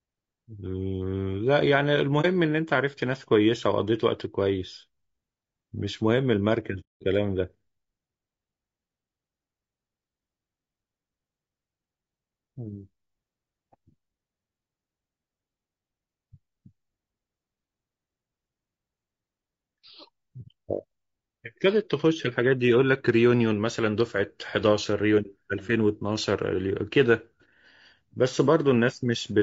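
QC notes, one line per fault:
Throughout, low-delay AAC compression: the speech has a rough, grainy texture with a hiss filling the gaps between harmonics and a thin, synthetic top end. That's most likely AAC-ELD, the video-call codec, running at 32 kbps. Its short frames can't pin down the pitch harmonics cleanly and eat up bits, so at this rate the damage is plainly audible, not subtle.
2.21 s, 6.80 to 7.02 s and 20.42 to 20.46 s, AAC frame loss with muting: three soft-edged dropouts where the audio just fades away and comes back. The decoder zeroed out the lost frames and the overlapping windows smoothed the edges into short fades. The ones at 2.21 s and 20.42 s are brief, around 30 ms each, roughly one frame. The 6.80 s gap runs about 210 ms, so several frames in a row went missing there.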